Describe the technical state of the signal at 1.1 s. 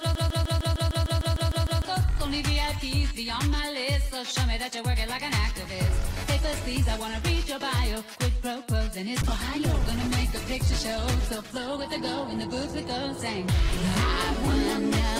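At 1.1 s you're right in the middle of a broken-record loop that's already running when the clip opens and lasts until 1.85 s. A 152 ms fragment repeats back to back, likely from a stalled player or stream resending its last chunk, so the real audio is gone.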